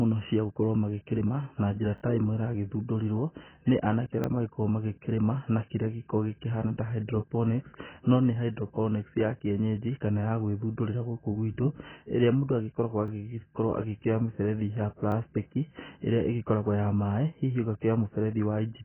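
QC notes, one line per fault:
throughout: AAC compression. The sound is dull and narrow, with nothing above 3.1 kHz. Sustained sounds and sibilants warble and fizz, and transients smear. The likely cause is AAC-LC coding at a very low bitrate, which fits about 12 kbps. With so few bits, the encoder drops the top of the spectrum. It leaves gaps in what remains or fills bands with substitute noise. The damage is heavy across the whole clip.
1.98–2.02, 4.24–4.26, 13.08–13.10, 15.12–15.14: repeated buffer. At each point one short slice of sound plays again with a hard join, heard as a quick stutter or buzz. The slice length fits a 20 ms buffer. At 1.98 it plays two extra times, just after "magĩkĩrĩma na njĩra" and before "ta ĩmwe ĩragĩthundũrirwo nĩ". The other three repeat once; the 4.24 one follows "ĩmwe ĩragĩthundũrirwo nĩ anake". New audio arrived late, so the last buffer played again, and little or no sound is lost.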